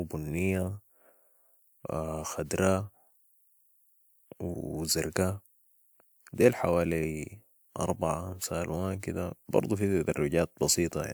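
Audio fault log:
No faults detected in this speech recording.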